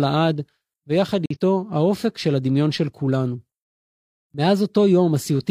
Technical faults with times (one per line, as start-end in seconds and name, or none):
1.26-1.37 corrupt frame muted